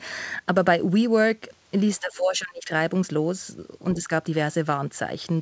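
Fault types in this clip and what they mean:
Speech suppressed in double talk: From 2.0 to 2.7 s the speech level drops sharply, by about 25 dB at its deepest. A second, much shallower dip of about 5 dB follows from 3.93 to 4.1 s. The likely cause is an echo canceller facing both sides talking at once. It cannot separate the near talker from the loudspeaker echo, so it turns both down. The talker is pushed under for those moments.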